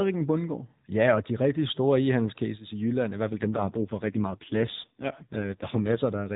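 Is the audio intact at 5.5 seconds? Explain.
No. At 5.5 seconds the speech is inside an AMR rate drop that runs from about 3.30 to 6.02 s. The mobile codec has been pushed to a much lower bitrate, spending fewer bits on the speech itself, and the roughness fits a fall from 12.2 to 4.75 kbps. The telephone band stays the same and nothing cuts out, but the voice turns coarser, buzzier and more synthetic than the lightly coded narrowband speech before 3.30 s.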